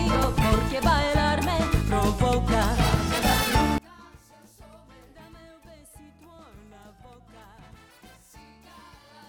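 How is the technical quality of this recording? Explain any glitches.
The recording has one fault. From 3.78 s to the end, the sound drops by about 28 dB and turns faint. The likely cause is one channel inverted: reversed polarity cancels shared content in a mono sum. The waveform shrinks abruptly, and the spectrogram dims.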